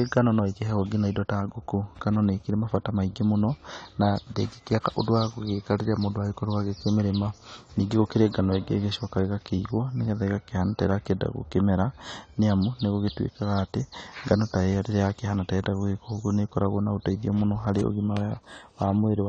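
The speech was likely squeezed through AAC compression at a low bitrate, consistent with AAC-LC at around 32 kbps. Throughout, nothing remains above 9 kHz, so the sound is dull and muffled, and the plainly audible codec damage smears sibilants into a warbling, fizzy texture.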